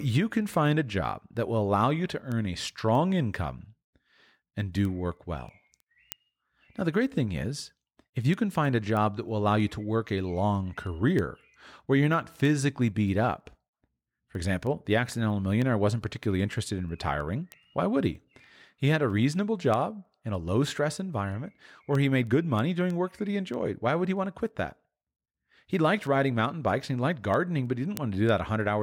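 From 0.10 s to 28.6 s the speech carries word clock ticks: sharp clicks of uneven strength recurring at a steady rate of roughly one every third of a second, around a hundred in all. The receiving device was running on its own clock rather than locking to the sender's digital stream. Each time the two clocks drifted a full sample apart, the data was misread at that point, which fits one sample being dropped or repeated per slip and an offset of roughly 70 ppm.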